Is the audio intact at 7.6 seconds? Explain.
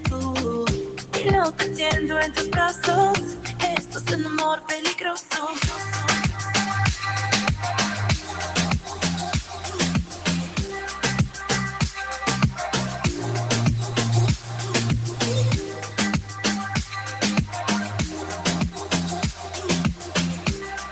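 No. A noise suppressor applied to music or sounds runs through the whole clip, so at 7.6 s held tones and tails sink by around 5 dB while attacks pass. Unlike codec dropouts, the sound never cuts out; it just pumps and thins.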